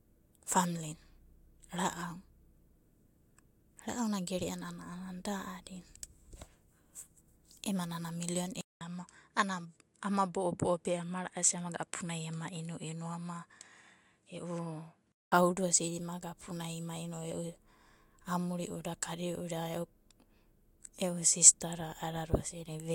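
After "ema nana milion", at 8.61 s, a 200 ms silence opens a duller stretch to 15.32 s: about 5 dB quieter, nothing above 11.4 kHz, new noise roughly 50 dB down. This is likely an input switched to a poorer device, reverting before "osidi imaga aounai ima".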